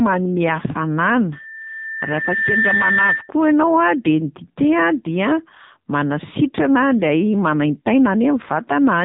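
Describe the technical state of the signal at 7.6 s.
At 7.6 s, as throughout, AMR narrowband mobile codec pulse-excited modelling, fitting a 6.7 kbps mode, leaves speech buzzy and synthetic, with the spectrogram blank above 3.8 kHz.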